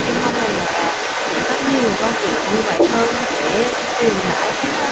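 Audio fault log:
Throughout, other side's voice leaking through: a second voice runs under the speech the whole way at about the same level as the talker, so the far end was likely played over a loudspeaker and the echo canceller let it back into the mic.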